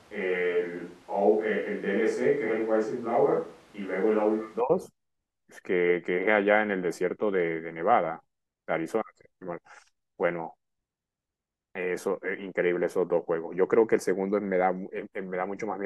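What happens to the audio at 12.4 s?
Nothing goes wrong at 12.4 s; the speech carries on intact through that moment, with no dropout, click, distortion or other fault to be heard.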